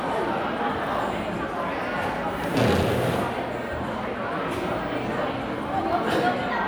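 At 2.75 s a brief burst of loose connector crackle runs until 2.83 s, about 80 ms of irregular scratching over the sound. A worn contact was making and breaking, chopping the signal erratically. Unlike a single digital click, it is a ragged burst of crackle.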